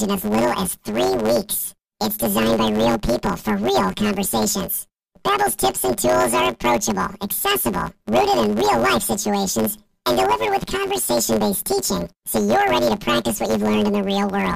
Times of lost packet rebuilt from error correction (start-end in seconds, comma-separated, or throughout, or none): none